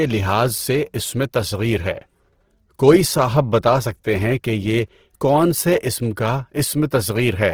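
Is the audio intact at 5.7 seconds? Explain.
No. At 5.7 seconds, as throughout the clip, the speech sounds rough and grainy, with a noisy texture where clean tone should be. This is likely Opus compression in its CELT music mode, refilling starved bands with folded or noise content, which fits roughly 16 kbps.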